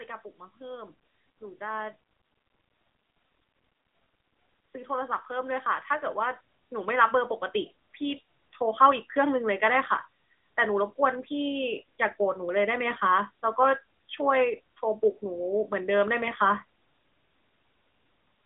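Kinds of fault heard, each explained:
AMR narrowband mobile codec: This is the old 2G/3G phone speech codec, and you can really hear it here. Everything is squeezed into a narrow telephone band with nothing above 3.8 kHz, so the speech sounds boxed-in and dull. The codec models the vocal tract with just a few pulses per frame, which gives the voice a buzzy, slightly synthetic edge. The damage is plain enough that it points to one of the mid-rate modes, around 10 kbps.
Automatic gain rising: Between 4.57 and 7.41 s, the automatic gain control decides the input is too quiet and slowly turns the level up, by about 10 dB over nearly three seconds. It isn't a sudden jump. The voice and whatever background sits under it swell together, because the gain is applied to the whole signal at once. That's the giveaway that it's the AGC ramping and not the speaker getting louder.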